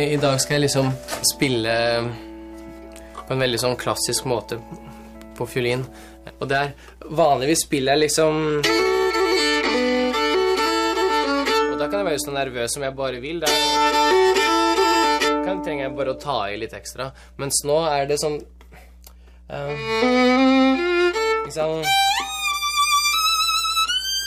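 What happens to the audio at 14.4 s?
Mains hum is present at 14.4 s, as it is throughout the audio. A ground loop or nearby transformer is leaking the 60 Hz power line into the signal, producing a steady low tone with some low harmonics, sitting roughly 25 dB beneath the wanted sound.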